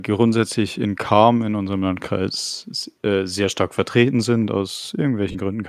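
Near the end, from 5.32 to 5.35 s, the speech briefly blurs into a noisy smear. These are lost LE Audio frames: about 30 ms of data went missing, and the decoder filled the gap by repeating the last spectrum with scrambled phase. The light, slightly grainy texture of the surrounding speech is likely from Bluetooth LC3 compression.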